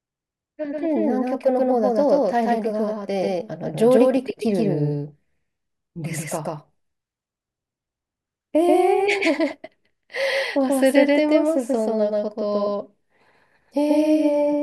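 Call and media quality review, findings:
Doubled audio track throughout: full-band speech copy trailing by about 150 ms at roughly equal level, no decay or room colour. Likely a second capture path or misaligned edit mixing audio twice.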